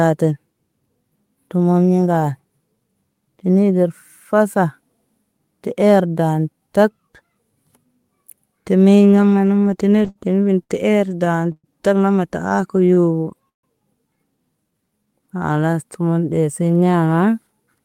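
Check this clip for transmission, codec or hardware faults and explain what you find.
Yes, there are network-related faults: two stretches of repeated stalls, two jitter buffer slow-downs, and a brief jitter buffer speed-up at the end.

Repeated stalls (stutter) first appear from 9.97 to 11.67 s, just before "tana marta". The speech catches and drags eight times, with each hitch held on the preceding sound for a moment, the longest for about 116 ms. Packets were reaching the receiver more slowly than playback consumed them, so the buffer ran dry repeatedly. The receiver bridged about 281 ms by extending the last audio, and nothing is lost. The same happens again from 12.62 to 13.66 s, after "tana marta": six hitches covering about 192 ms, the longest 143 ms.

A jitter buffer slow-down overlaps that second stutter, from 12.49 to 13.44 s. The speech stretches to about 94% of normal speed while its pitch stays put. 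The buffer was short of reserve, so the receiver repeated single pitch periods and bits of pause to gain about 65 ms. A stronger slow-down follows from 14.64 to 15.75 s. Here the speech runs at about 88% speed, with drawn-out sounds, as roughly 148 ms was added.

A jitter buffer speed-up comes at the very end, from 17.47 to 17.80 s. The speech briefly rushes to about 114% speed at an unchanged pitch and sounds hurried. The buffer had accumulated more delay than it aims for, so the receiver trimmed short pitch-period pieces, removing about 50 ms in total.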